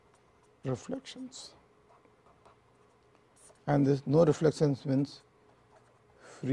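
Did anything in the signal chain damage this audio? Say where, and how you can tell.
No, nothing along the chain leaves a mark here; there's no stage I'd point to as having damaged this audio.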